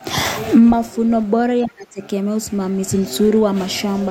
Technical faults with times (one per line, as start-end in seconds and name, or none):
1.65-2.00 speech suppressed in double talk